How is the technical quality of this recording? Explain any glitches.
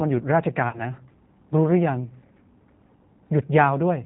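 The recording is clearly degraded: a low-bitrate speech codec colours the whole clip, and one short dropout is patched over early on.

G.729 codec, throughout: the speech has the rough, slightly synthetic texture and hard 4 kHz ceiling of a codec that rebuilds each 10 ms frame from a vocal tract filter, a pitch predictor and a few pulses, which fits an 8 kbit/s G.729A stream. The damage is plainly audible: nothing above 4 kHz comes through, and the voice sounds rough and synthetic rather than natural.

VoIP packet loss concealed by the speech codec, 0.69 to 0.84 s: about 40 ms of audio went missing, consistent with two lost packets. The decoder filled the gap by repeating its last pitch and filter settings at falling gain, so the sound is stretched into a brief fading buzzy tone or coloured noise. Because each frame is built on the previous one, the voice stays weak and distorted until about 0.84 s, well after the gap ends.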